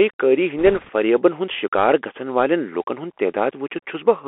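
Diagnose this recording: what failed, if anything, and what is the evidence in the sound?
The speech sounds narrow and boxed-in throughout, with nothing below about 300 Hz or above 3.4 kHz. S sounds are scratchy and a fine granular hiss sits underneath. This is the codec stage: a Bluetooth CVSD headset codec, consistent with a 64 kbit/s link, whose one-bit up/down steps cannot keep pace with loud high-frequency sounds.

From 0.59 to 0.90 s a rushing, crackly noise spreads over the speech, with no sharp clicks. The cause is bit errors on a Bluetooth voice link, at roughly one and a half percent. Each flipped CVSD bit nudges the waveform only slightly and its effect fades, so the damage is a diffuse wash.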